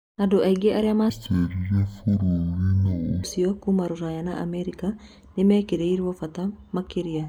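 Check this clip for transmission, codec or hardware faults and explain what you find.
There's one clear fault here: a stretch of stereo read as mono, from about 1.10 to 3.24 s. In that section the left and right samples get strung together as one channel, so every frame is effectively played twice as long. The speech drops to half speed and a full octave (12 semitones) lower, sounding slowed and growly, and a faint mirrored copy of the sound shows up in the upper half of the spectrum.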